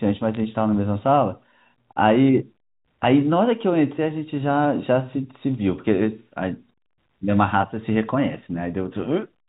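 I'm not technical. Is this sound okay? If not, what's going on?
No. Bit errors on a digital phone line cause a short burst of crackle from 0.34 to 0.37 s: a few of the digits carrying the phone signal got flipped, and each flipped digit changes one tiny slice of the sound, making a sharp tick when it hits an important digit.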